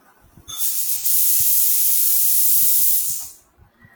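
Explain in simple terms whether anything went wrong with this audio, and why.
Around 0.97 to 1.05 seconds, the speech briefly goes smeared and hissy for about 43 ms. That's AAC frame loss with concealment: a small chunk of the compressed stream went missing, so the decoder patched the gap by reusing the sound just before it, with its fine detail scrambled. The loss is too short for any fading, so you hear a quick blurry patch. The length fits a single lost frame.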